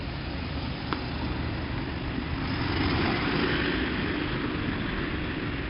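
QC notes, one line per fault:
throughout: 4-bit ADPCM compression. A gritty hiss rides on every loud moment and drops away with the level, and sharp attacks sound frayed where the coarse 4-bit steps cannot grow fast enough to follow them. The codec damage is heavy, and nothing is heard above about 5.3 kHz, which points to a low sample rate of roughly 11 kHz and about 44 kbps. Unlike a steady noise floor or MP3 swirl, the grit scales with the signal itself.
1.74–5.69 s: time-stretched section. From 1.74 s to the end, the pace jumps to about 1.52 times faster while pitch stays put, so the audio turns rushed, with short pieces dropped to squeeze it. This is likely a time-stretch fitting the audio to a length. A plain speed-up or wrong sample rate would raise the pitch along with the tempo. Here only the timing changes.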